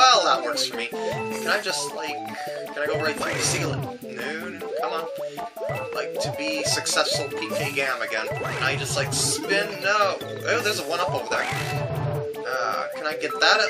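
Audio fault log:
Nothing stood out on listening to this audio.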